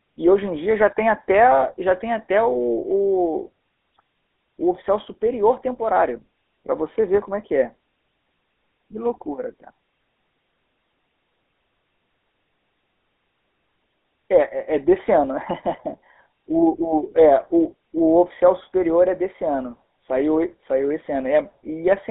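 Speech runs through a GSM full-rate codec from start to finish, band-limited to about 250 Hz to 3.6 kHz with a gravelly buzz, unlike plain telephone filtering, consistent with a 13 kbps stream.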